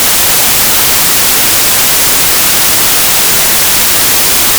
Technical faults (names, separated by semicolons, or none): wrong sample width